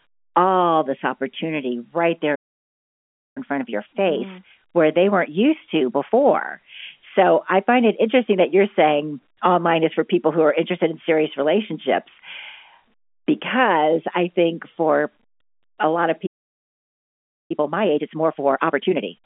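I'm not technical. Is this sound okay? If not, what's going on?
No. There are two playback stalls: at 2.35 s, just after "this opportunity right there", the speech goes silent for about 1.0 s, and at 16.26 s, after "a lot of", for about 1.2 s. The player most likely ran short of incoming data and paused.

Each silence is followed by time-compressed catch-up, from 3.38 to 6.38 s at 1.1 times normal speed and from 17.51 s to the end at 1.5 times. Tiny pieces are cut and blended together, so the talking sounds hurried without going higher in pitch.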